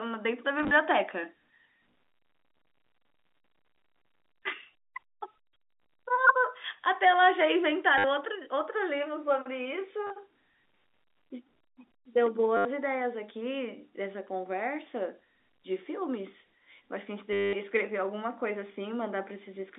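A telephone speech recording, band-limited to roughly 200 Hz to 3.7 kHz as expected for G.711 coding, carries packet loss with the last packet repeated at 0.59 to 0.71 s (brief stutters of at most 20 ms scattered over 120 ms), 7.98 to 8.04 s, 10.07 to 10.10 s, 12.57 to 12.65 s, and 17.33 to 17.53 s, the longest. Each gap is filled by looping the previous chunk, so the longer runs buzz near 100 Hz, which fits 10 ms packets. That buzzy, robotic repetition sets it apart from plain dropouts, which leave silence.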